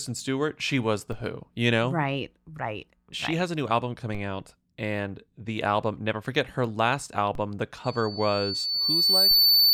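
At 1.12 s, between "she was the" and "who you know", a DC step shifts the waveform's zero line by about -29 dBFS. It recurs at 4.15 s after "has a new album", at 7.35 s after "never forget her last", and at 9.31 s. Each is a dull low thump, with the offset decaying back through a roughly 5 Hz high-pass. From 7.84 s to the end, loudspeaker feedback squeal takes hold. The microphone re-enters its own loudspeaker output, and loop gain above unity at 4.5 kHz lets that tone grow on its own. It swells over about a second and a half into a piercing whistle, finishing around 10 dB above the speech.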